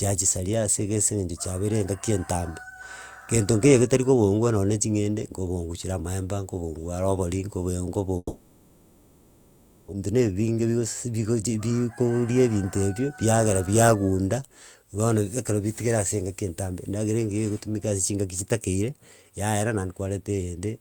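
At 8.17 s the speech breaks off, and what you hear instead is the last bit of sound smeared out into a buzzy, hissy tail that fades, then a moment of near-silence before the talker comes back at 9.94 s. That's a long network dropout, likely: no audio got through for close to two seconds, the receiver papered over it with concealment, and about 1.6 s of speech is simply gone rather than delayed.

Right after, from 10.06 to 11.15 s, the speech sounds a touch rushed but keeps its pitch, running at about 109% speed. That's a jitter buffer speed-up. Once audio started flowing again the buffer was holding roughly a tenth of a second too much, so the receiver kept snipping out tiny pitch-period-sized chunks to catch up, trimming around 100 ms in total before settling back to normal pace.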